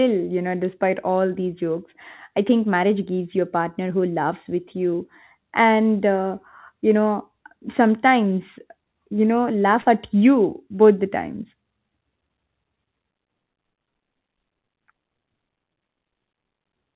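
At 9.82 s to 9.87 s there is a short concealed packet loss: about 40 ms of the call arrived too late for the decoder, and the receiver filled roughly 36 ms of that gap by extending the preceding sound before blending back into the real signal. It is heard as a brief synthetic patch in the speech. The audio carries nothing above 4 kHz, which fits a G.711 mu-law call path at 64 kbps.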